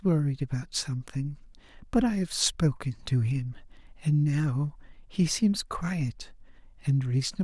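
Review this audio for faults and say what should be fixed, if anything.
Nothing here needs fixing; no faults were heard.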